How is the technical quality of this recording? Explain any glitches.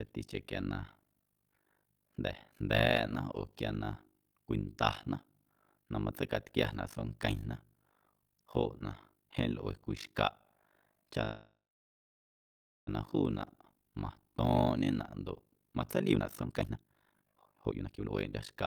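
The technical quality is poor. Three faults are clearly audible: a constant flutter across the whole clip, a freeze partway through, and a hurried final stretch.

Overlap-add ripple runs through the entire speech clip. The audio was split into windowed frames and rejoined with an overlap whose gains don't add up evenly, so the level dips once per frame, around 50 times a second, by about 60 dB at the troughs. It sounds like a harsh, robotic tremolo. The waveform shows a regular comb of deep notches in the envelope, and a spectrogram shows evenly spaced vertical stripes across all frequencies.

A call audio freeze runs from 11.23 to 12.89 s. The likely cause is packets held up in transit, leaving the jitter buffer empty. The receiver carried the last sound forward as a fading buzz or hiss, then went silent for about 1.27 s before the speech resumed where it had stopped. Nothing is lost, but 1.64 s of extra delay is inserted. 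A spectrogram shows a smeared, static band that decays into a blank gap.

Jitter buffer speed-up runs from 16.00 s to the end at 18.66 s. The jitter buffer was holding more audio than its target, so the receiver trimmed many short pitch-period pieces to catch up, removing roughly one and a half seconds in total. The speech plays at about 154% speed with its pitch unchanged, so it sounds rushed and clipped. Syllables are compressed in time on the waveform, while harmonic spacing on the spectrogram stays the same.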